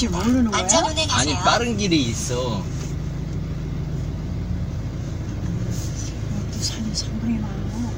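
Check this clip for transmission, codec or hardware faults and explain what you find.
One fault is present: a jitter buffer speed-up from 4.92 to 6.83 s. The receiver's jitter buffer had built up more audio than its target, as happens when late packets arrive in a bunch, so it trimmed the backlog by repeatedly cutting out short pitch-period-sized slices, about 70 ms in total. Across that stretch the sound plays at roughly 103% speed with its pitch unchanged.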